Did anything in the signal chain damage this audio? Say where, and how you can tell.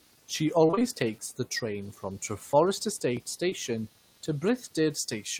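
Yes. Throughout the speech there is computer activity noise: a faint buzzing texture pulsing at roughly 200 times per second, roughly 35 dB below the voice. This is in the analogue wiring. Processor or peripheral load is modulating the shared ground, so the buzz follows the machine, not the talker.

From 0.67 to 0.84 s, just before "takes the train from", there is repeated packet loss heard as robotic sound. The stretch turns choppy as several holes, the longest about 21 ms, are each bridged by extending the previous sound. Nearly half that span is synthetic fill. This is a network fault.

At 3.49 to 3.53 s there is a short concealed packet loss. A brief smear replaces about 20 ms of audio that reached the decoder too late. The receiver continued the preceding sound across the gap and then blended back into real audio, which is concealment of a network drop.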